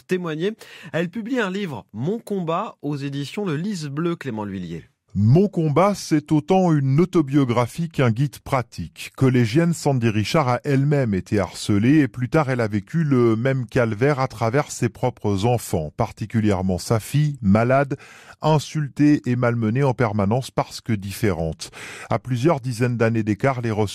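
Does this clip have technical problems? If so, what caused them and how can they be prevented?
Yes. From 4.79 s to the end of the clip, just before "du harcèlement sont les", there is a section at the wrong speed. The speech plays at about 0.884 times its recorded rate, so it drags and sits roughly two semitones lower. The likely cause is audio being played or resampled against a mismatched clock. Unlike a pitch-shift fault, tempo and pitch drop together, with a sharp step at 4.79 s rather than a gradual drift. Matching the sample rate between recorder, editor and player throughout the chain prevents this.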